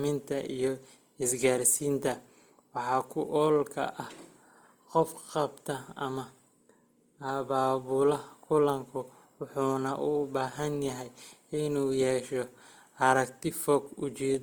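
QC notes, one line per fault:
Throughout: Opus compression. Speech harmonics turn grainy and rough rather than swirly, likely from Opus in CELT mode at a rate fitting about 24 kbps, which fills starved bands with folded or noise energy. A spectrogram shows speckled harmonics, few holes, and a cut-off near 20.3 kHz.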